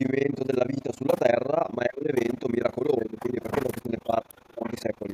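Overlap-add ripple runs through the whole clip. The speech was split into windowed frames and rebuilt with an overlap that doesn't add back to a steady gain, so the level swings once per frame, around 30 times a second. The swing is deep, about 60 dB between peaks and troughs, so the speech is chopped into a harsh, rough flutter.

Speech suppressed in double talk first appears from 1.87 to 2.10 s and returns at 2.98 to 3.45 s, 3.64 to 4.64 s and 4.87 to 5.03 s. The talker's level sags during these spans. The longest and deepest is the 3.64 s stretch, which drops by roughly 30 dB. The others fall by around 10 to 20 dB. The likely cause is an echo canceller that couldn't tell the near talker from loudspeaker echo while both sides spoke, and turned everything down.

Echo leak shows up as brief, faint repeats of the speech arriving 1.08 s late, at 2.22 to 2.27 s and again at 4.64 to 4.77 s. 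The first is only a scrap, well below the main speech. The second is louder and longer, though still clearly under the direct sound. These likely come from a speakerphone whose echo canceller left part of its microphone pickup unremoved and sent it back.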